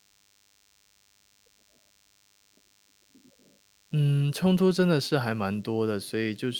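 A DECT cordless phone buzz runs through the whole speech clip: radio bursts every 10 ms, rectified by the audio circuit, give a thin 100 Hz buzz, roughly 40 dB below the speech.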